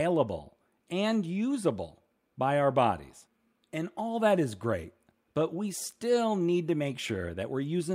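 A speech recording, with nothing technically wrong with it.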